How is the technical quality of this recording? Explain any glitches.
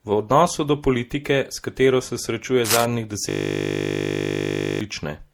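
The recording has three technical problems: a layered codec texture throughout the speech, a brief scratch, and a longer frozen buzz.

Transcoding between lossy codecs runs through the whole clip. The audio likely went through one lossy codec and then another. The mix of smearing and swirly artefacts fits MP3 at around 64 kbit/s followed by Opus at around 48 kbit/s. Each stage adds its own flaws on top of the last, and nothing is present above 20.2 kHz.

Cable scratch noise appears from 2.65 to 2.85 s. It is a dense, ragged burst of rustling about as loud as the speech. Its likely cause is a worn cable, connector or control being moved, which makes the contact resistance jump rapidly.

A system hang loop runs from 3.29 to 4.81 s. The system froze while the audio hardware kept replaying the same 20 ms stretch of its buffer. Because the loop is so short, it repeats 50 times per second and comes across as a steady 50 Hz buzz instead of the speech.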